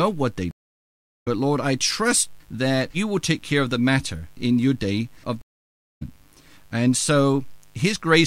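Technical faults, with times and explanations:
Throughout, mains buzz: a steady, raspy buzz sits under the speech at about 40 dB below it, built on the 50 Hz mains frequency. Sharp switching spikes from a dimmer, a rectifier or an unshielded cable enter twice per mains cycle, so the interference is not a clean hum. It carries a long series of 50 Hz harmonics stretching up into the kilohertz range, which gives it that edgy, buzzing texture.
0.51–1.28 s and 5.41–6.02 s, stream reconnect: the sound drops out for 0.72 s and then 0.57 s as the connection breaks and the player goes silent. It then reconnects and starts a fresh decoder mid-stream. Because the stream carried on during the gap, playback resumes further along, roughly half a second later the first time and a little under half a second the second time. The restarted decoder brings the audio back in with a fade-in.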